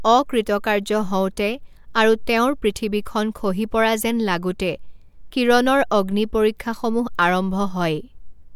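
No technical faults are audible anywhere in the speech recording.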